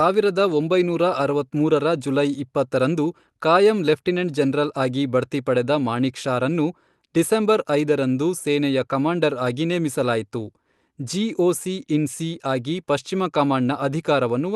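No technical faults can be heard anywhere in the speech, which comes through an ordinary call path with its Opus coding intact.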